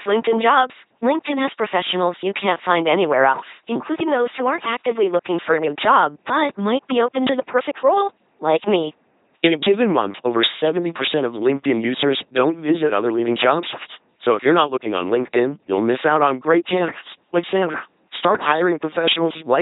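Throughout the speech, an LPC-10 vocoder rebuilds each instant as pure buzz or pure hiss through a ten-pole filter. The result is a heavily damaged, mechanical robot voice that fits a 2.4 kbit/s link. A spectrogram shows rigid harmonic stripes or flat noise, and nothing above 3.9 kHz.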